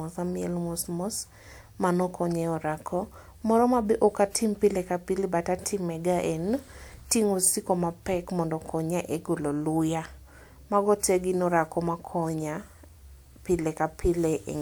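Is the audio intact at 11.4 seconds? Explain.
Yes, the speech at 11.4 seconds is intact, with no dropout, click, distortion or other fault at that moment.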